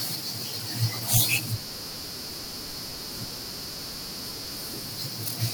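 At 1.17 s the speech jumps, likely a dropped buffer (overrun) losing under two milliseconds; the waveform shows an abrupt discontinuity and the spectrogram a thin vertical broadband line.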